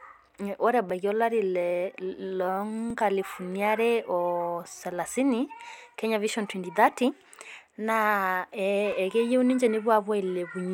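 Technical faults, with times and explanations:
0.90, 2.90, 4.91, 6.92 (just after "kenya vision twenty") and 8.92 s, overlapping chunks: each 2.0 s block starts 6.5 ms before the previous one ends, so that sliver plays twice, giving a tiny stutter. Unlike dropouts, nothing is missing, and the clicks recur at about 2 s spacing.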